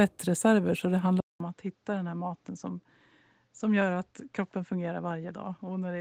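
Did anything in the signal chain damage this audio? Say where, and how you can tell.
Yes. Right after "så det", at about 1.20 s, there's a 200 ms gap, and from there to the end the speech is duller and boxier, with nothing above 7.6 kHz, a level drop of about 5 dB, and a new noise floor somewhere around 45 dB down. That points to the driver or device stage, most likely the input switching to a poorer device in mid-recording. The light, fullband Opus voice compression wouldn't cut the band like that.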